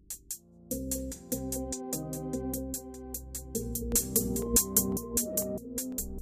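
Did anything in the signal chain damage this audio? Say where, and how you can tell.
Yes. Periodic USB or driver dropouts: from 3.92 to 5.92 s, regular ticks every 0.5 s, about five brief gaps of roughly a millisecond where a blocked driver inserted silence.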